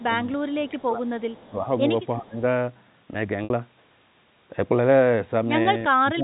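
From 0.0 to 0.32 s and again from 0.57 to 1.02 s, the talker's level sinks by about 15 dB in patches. This is likely speech suppressed in double talk: with both sides active, the echo canceller turned everything down. The sound dims rather than vanishing outright, which separates it from a network dropout.

From 1.08 to 1.5 s comes a faint echo leak. A copy of the sound trails 355 ms behind at about 30 dB below it, likely loudspeaker pickup the canceller failed to remove. The lag is fixed and distinct, so it is not the smeared tail of room reverberation.

The dips return, likely the same suppression, at 1.5 to 1.68 s (about 10 dB), 2.18 to 2.38 s (about 20 dB) and from 5.89 s to the end (about 30 dB, the deepest).

At 3.44 s, packet loss with pitch repetition bridges a 60 ms gap, which fits six 10 ms packets. The gap is filled with a held, buzzy repeat of the last pitch period that fades out, followed by a short cross-fade back. 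At 5.63 s, a 20 ms loss leaves only a brief buzz. Because the gap is filled with looped tone rather than silence or level dimming, it is distinct from the suppression dips. All of this sits inside the G.711 telephone band, with nothing above 4 kHz.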